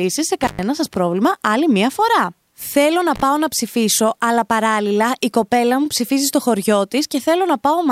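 Around 0.43 to 0.63 s, just before "σας πρόβλημα άλλη μία", an intermittent contact drops the speech for about 117 ms, crackling at both edges with faint hiss while the line's open. Again at 3.16 to 3.22 s before "να ψηφίσω αλλά παράλληλα", about 42 ms.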